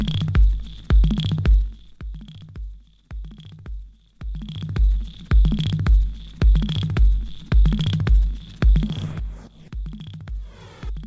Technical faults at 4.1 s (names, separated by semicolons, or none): none